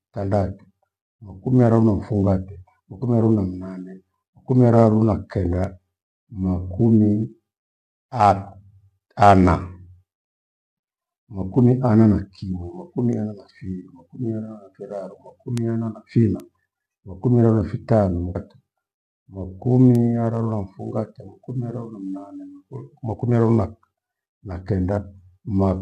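Bit error spikes tick sharply at 5.64, 15.58 and 16.4 s. Each is a single flipped bit throwing one to three samples off by a power of two, seen as a lone needle in the waveform and a thin full-height vertical line on the spectrogram. At 18.35 s the speech jumps ahead with a small blip, likely a stream segment skipped, leaving an abrupt splice in the waveform and a discontinuous edge on the spectrogram. One more bit error spike ticks at 19.95 s.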